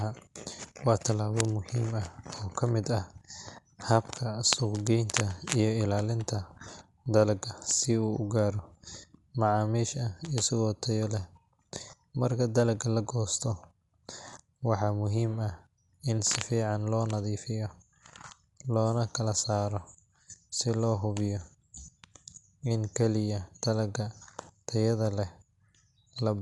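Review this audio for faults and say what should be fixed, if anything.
Dolby Digital compression, throughout the clip: the speech sounds dull, with nothing above 11.5 kHz and a rough, fluttering noise around tones. The likely cause is a low-bitrate AC-3 encode, consistent with roughly 64 kbps, where the encoder narrowed the band and left many frequency lines without mantissa bits, so the decoder filled them with dither noise. To prevent it, encode from the original source at a higher bitrate or in a lossless format.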